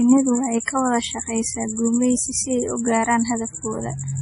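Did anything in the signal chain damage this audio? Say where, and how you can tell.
Yes. MP3 compression throughout the speech, at the codec stage: nothing survives above 10.6 kHz, and weak spectral detail flickers frame to frame, giving a watery, swirly texture with smeared consonant attacks. That heavy damage is likely from a starved bitrate, which fits around 32 kbps.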